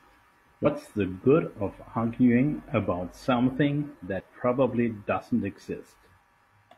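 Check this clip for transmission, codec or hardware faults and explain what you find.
Two short faults turn up, both damaged data in a compressed stream, around 0.62 to 0.66 s and again at 4.20 s. Corrupted bytes in the stream throw the decoder off its frames until it finds the next header, so each spot comes through as a brief glitch in the speech.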